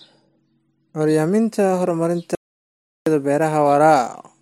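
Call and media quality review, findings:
Audio dropout to silence, 2.35–3.06 s, 0.71 s speech lost. Waveform flat, spectrogram blank, no room tone; likely input device or link loss.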